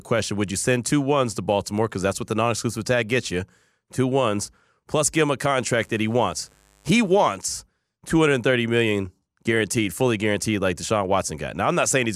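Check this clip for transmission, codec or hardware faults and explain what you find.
One hardware fault is present. From 5.81 to 7.31 s, a faint, raspy mains buzz sits well below the speech: spiky 50 Hz interference, likely from a dimmer or poor shielding, spreading harmonics into the kilohertz range.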